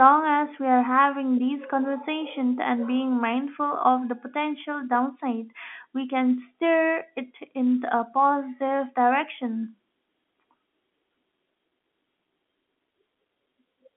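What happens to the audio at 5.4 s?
Nothing goes wrong at 5.4 s: the speech there carries on intact, heard through the narrow telephone band of G.711 coding with no dropout, click or distortion at that point.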